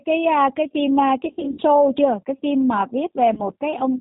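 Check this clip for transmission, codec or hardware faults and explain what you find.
Two faults are present: the whole clip has passed through a low-bitrate speech codec, and two stretches show packet loss hidden by that codec's concealment.

G.729 codec, throughout: the speech sounds like G.729A at 8 kbit/s. The codec does not send the waveform. It sends a vocal tract filter, a pitch predictor and a few pulses per 5 ms half-frame, and the decoder rebuilds the speech from those. Nothing above 4 kHz survives, so the speech is dull, and the damage is plainly audible as a rough, synthetic edge on every syllable.

VoIP packet loss concealed by the speech codec, from 1.25 to 1.63 s and from 3.34 to 3.41 s: when packets went missing, the decoder kept extrapolating from its last pitch and filter and faded the gain frame by frame. In the first stretch the losses are scattered across about 360 ms, which fits roughly 230 ms of missing audio with the longest gap near 70 ms. 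There the speech smears into a buzzy tone or coloured noise that fades, and stays weak or distorted between gaps. The second dropout is brief, about 30 ms, and sounds like a short stretched-out blur.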